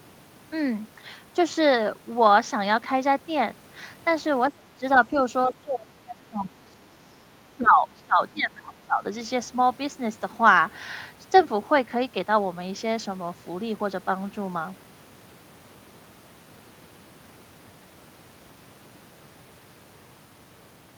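The speech drops by up to roughly 30 dB at 4.49–4.84, 5.47–7.22 and 7.57–9.05 s, likely speech suppressed in double talk by the echo canceller.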